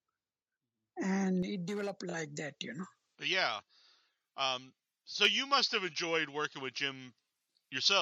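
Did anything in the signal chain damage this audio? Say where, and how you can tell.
Yes. From 1.43 s to the end, the speech turns thin, bright and sibilant, with sibilants spitting forward. The treble sits about 11 dB above the 1 kHz level at 10 kHz, which fits a J.17 pre-emphasis curve. This is pre-emphasis left on. A treble boost was applied for transmission, and the receiving or playback stage never applied the matching de-emphasis cut.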